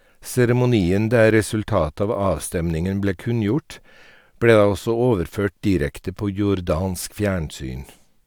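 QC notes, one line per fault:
Nothing to flag here; the speech comes through without any technical problems worth noting.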